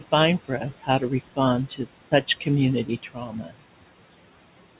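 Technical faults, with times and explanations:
Throughout: noise suppressor artifacts. The steady room noise, which sits about 17 dB below the speech, is pulled down by about 18 dB in the gaps and comes back up under the talking, so the background pumps in time with the speech. The suppressor decides band by band and frame by frame. The 4 kHz ceiling, which fits a narrowband call codec such as G.711, adds its own dull, band-limited character.
0.48–1.38 s and 2.85–3.55 s: speech cut by the noise suppressor. In both stretches the suppressor mistakes quiet parts of the speech for noise and turns them down along with the background. Across the first range about a third of a second in total is affected, with the deepest dip about 12 dB. In the second, about 0.4 s is affected and the drop reaches about 17 dB. Soft consonants and trailing sounds come out faint or swallowed rather than fully articulated.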